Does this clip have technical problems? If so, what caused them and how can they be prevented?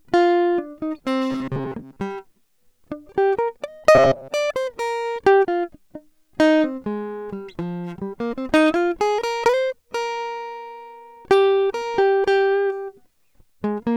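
Yes. Robotic sound from repeated short buffers at 1.31–2.02 s and 3.95–4.30 s: a metallic 134 Hz buzz, likely from late audio forcing an approximately 7.5 ms buffer to loop. Prevent it by giving the audio path enough buffering and processing headroom that new audio always arrives on time.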